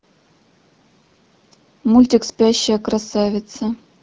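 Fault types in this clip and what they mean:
AMR bit errors: From 0.98 to 1.17 s the speech turns hoarse and gargly. Pitch and loudness stay roughly in place. The less protected bits of each coded frame arrived flipped, but the check on the key bits still passed, so the decoder used them. Pulses driving the voice model landed wrongly, and fine pitch, gain and spectral values drifted. The span fits about ten 20 ms frames, with about 7 percent of bits wrong, inside light AMR-WB coding at 12.65 kbit/s.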